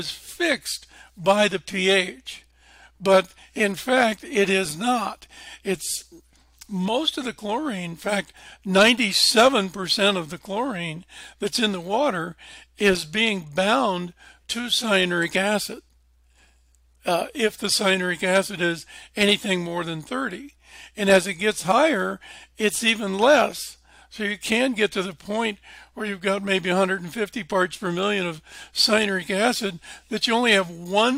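No technical faults can be heard anywhere in this clip.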